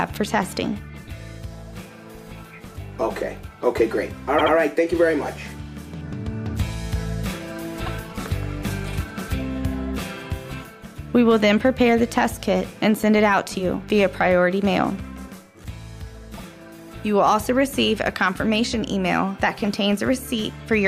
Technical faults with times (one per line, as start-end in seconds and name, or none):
4.38-4.53 repeated frames
7.85-7.90 repeated frames
16.37-16.42 repeated frames